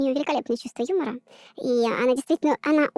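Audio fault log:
throughout, wrong sample rate: the speech runs 1.5 times too fast and sits about 7 semitones too high, so it sounds hurried and thin. The samples are being read out faster than they were captured, with no rate conversion in between, so every cycle of the waveform is compressed in time and speed and pitch rise together by the same ratio. A 1.5 ratio fits audio recorded at 16 kHz being played back at 24 kHz.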